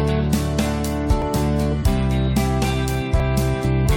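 Two tiny skips at 1.22 and 3.20 s, about 2 s apart: that's overlap between stream segments, where the player trims a few milliseconds at each segment join.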